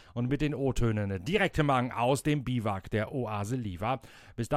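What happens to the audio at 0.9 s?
Nothing goes wrong at 0.9 s; the speech there plays through intact, with no dropout, click or distortion.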